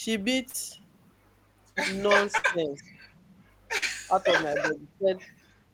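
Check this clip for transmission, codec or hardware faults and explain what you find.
Three kinds of transmission fault are audible in this speech clip. They are short concealed packet loss, a burst of packet loss and speech suppressed in double talk.

Short concealed packet loss occurs at 0.49–0.56 s and 3.78–3.84 s. About 40 ms never arrived each time. The decoder extended the previous sound, leaving a brief smear.

A burst of packet loss hits at 2.38–2.46 s. About 60 ms is missing. The concealed sound is held and fades, then the audio resumes further on.

The voice drops sharply at 2.06–2.87 s, 4.06–4.22 s and 4.99–5.07 s, and slightly at 4.58–4.77 s. This is likely speech suppressed in double talk, with the echo canceller turning the talker down.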